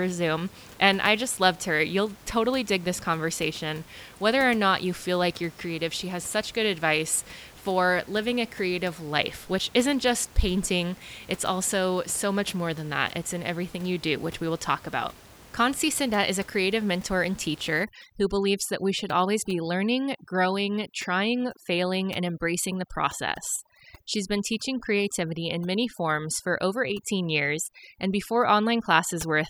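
A speech recording where, from 17.84 s to the end, just after "a creative mentor and", overdone noise removal sets in: the reduction pushes whole frequency bands down wherever they sit near its noise estimate. The background drops and breaks up into twinkling specks, and the voice has its softer detail stripped along with the room noise that sat about 23 dB below the speech.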